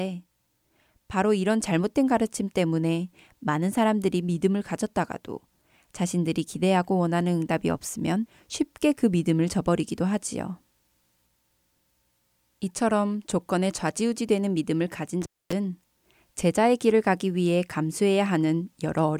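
Intermittent contact at 15.22 to 15.53 s in this speech recording: a loose connection briefly opens, cutting the sound for about 0.25 s, with crackle at each edge and faint hiss.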